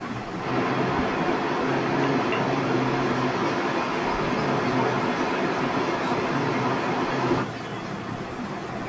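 From 0 to 0.4 s, the speech dips hard and breaks up for about 0.3 s in total. At its deepest it falls by roughly 40 dB. This is likely speech suppressed in double talk. Both sides were talking, and the echo canceller could not tell the near talker from the loudspeaker echo. So it turned everything down.

From 0.4 to 7.46 s, a second copy of the voice trails the first by 286 ms. It sits roughly 5 dB louder than the speech itself. This is likely an echo leak. A far-end loudspeaker fed the microphone, and its canceller let that pickup through.

From 7.47 to 8.86 s, the suppression returns. The speech is ducked and chopped for about a second in total, with drops of roughly 40 dB.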